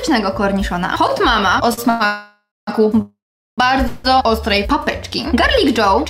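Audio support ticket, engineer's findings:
Short stall from a late packet, 1.73–1.80 s: last sound held about 42 ms with a slight buzz or dip, nothing lost. The jitter buffer ran empty briefly and no fade or silence followed, unlike a freeze.

Call audio freeze at 1.90–2.02, 2.06–2.69, 3.01–3.60 and 3.88–4.06 s: held sound decays into a buzz or hiss. The 2.06 and 3.01 s events fall fully silent, for about 210 and 410 ms. Likely delayed packets starving the jitter buffer; playback resumes in place, adding delay without losing audio.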